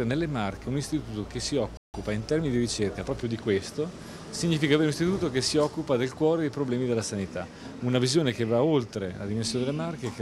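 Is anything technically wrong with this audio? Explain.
Yes, there are two linked faults. At 1.77 s a playback stall cuts the sound off in mid-flow, leaving about 167 ms of silence until 1.94 s. The likely cause is that the player's buffer ran dry or its output thread was held up, so nothing reached the output until it recovered. Unlike a dropout, where a fragment is lost and the sound skips ahead, this gap is a pause after which the audio carries on.

From 1.94 s to 3.60 s a time-compressed catch-up follows. The player is clearing the backlog built up during the stall by cutting out short slices and cross-fading across the joins. This runs the sound about 1.1 times faster while the pitch stays the same, giving a slightly hurried pace. A simple speed-up would also raise the pitch. Here the pitch does not shift, which marks this as time compression rather than resampling.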